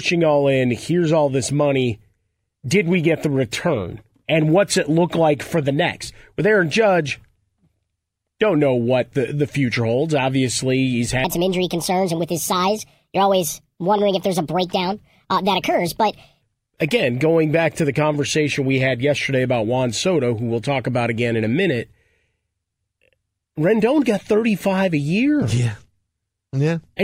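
Section at the wrong speed, 11.24 to 16.42 s: the speech runs 1.44 times too fast, likely from a clock mismatch, lifting pitch about seven semitones and sounding hurried and high.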